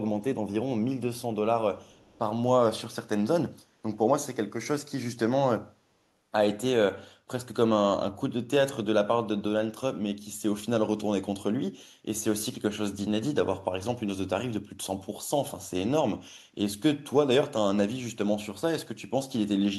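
From 1.84 to 2.19 s, a faint delayed copy of the speech trails about 341 ms behind, very quiet: an echo leak, likely from incomplete echo cancellation on a loudspeaker end.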